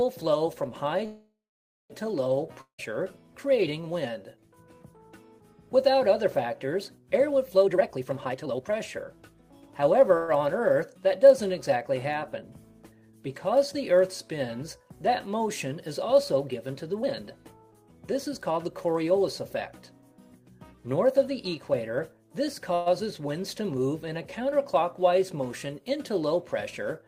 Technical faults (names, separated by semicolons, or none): call audio freeze; long network dropout; jitter buffer speed-up